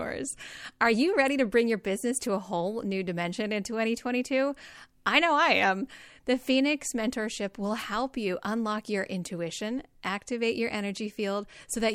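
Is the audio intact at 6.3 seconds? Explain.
Yes, the audio is intact at 6.3 seconds, with no audible fault at that moment.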